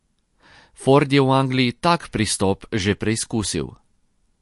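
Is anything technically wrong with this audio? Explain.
Yes. Throughout, the speech shows MP3 compression artefacts, likely from a low-bitrate encode: nothing above 11.3 kHz, with watery, swirling texture as starved frequency lines flicker between frames.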